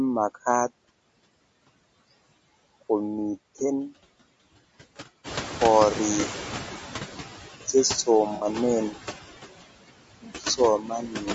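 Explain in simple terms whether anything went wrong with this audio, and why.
Several things went wrong, some lasting the whole clip of speech and some at specific moments.

Noise suppressor artifacts run throughout. A noise suppressor keeps guessing which parts of the sound are steady background hiss and turns those parts down, many times a second. Here it pushes the background down hard, so the room noise drops away in the pauses and comes back underneath the talking.

The voice also sounds rough and grainy from start to finish, with a hazy, artificial quality in the upper range. That points to low-delay AAC compression, the kind of audio squeezing used in video calls. It works in very short chunks so the call doesn't lag, but short chunks capture the fine structure of a voice poorly. When the data budget is tight, a little noise fills the gaps within the voice. This damage is plainly audible here, and the compression is the likely cause.

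Around 5.0 s the room noise gets noticeably louder, and from 5.24 to 7.36 s you hear the noise suppressor catching up. The suppressor still expects the earlier, quieter background, so the extra noise comes through with less reduction. It then sinks gradually over about two seconds as the suppressor learns the new level.

Two short dropouts come from AAC frame loss with concealment. Pieces of the compressed stream went missing, and the decoder covered each gap by reusing and blurring what it had just heard. At 6.21 to 6.25 s the sound goes briefly smeared and noisy, which fits a single lost chunk. At 8.35 to 8.45 s a longer gap makes a phasey, washed-out patch.

Near the end comes speech cut by the noise suppressor. The suppressor mistook parts of the speech for background noise and turned them down along with it. From 10.21 to 10.59 s, about a fifth of a second of speech is pushed down deeply and sounds swallowed. 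From 10.79 to 11.22 s, about a third of a second is dimmed more gently and comes out faint.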